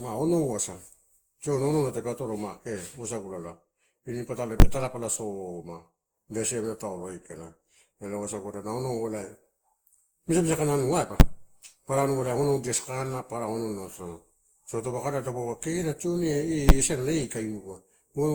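Speech runs throughout with a swirly, smeared, hollow quality and blurred attacks. This likely comes from generation loss, consistent with roughly ten passes of Opus at about 64 kbit/s. Loud single bangs occur at 4.60 to 4.62 s, 11.2 s and 16.69 s. These are invalid numbers at full scale, with output held flat at one extreme value for 10 to 20 ms blocks.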